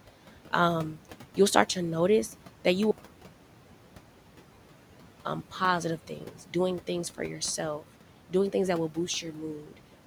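Throughout the speech, noise suppressor artifacts are audible. The room noise, which sits about 18 dB under the voice, is pulled down by about 12 dB whenever the speech stops and rises again beneath it. A spectrogram shows the background floor pumping in step with the speech.

After "to notice that you", the sound drops abruptly at 2.91 s to faint hiss roughly 50 dB below the signal and returns at 5.25 s, a 2.34 s gap. It is most likely a dropout to a faint residue, where the signal was lost but the path stayed live. The waveform collapses to a thin flat band with hard edges, unlike a fade.

Between 6.07 and 6.55 s, just before "things for yourself doing", the noise suppressor cuts speech for about 150 ms in total, turning parts of it down by up to about 11 dB so that they sound swallowed. The same happens from 9.60 to 9.78 s, with drops of up to about 10 dB. A spectrogram shows brief gaps carved out of the speech energy.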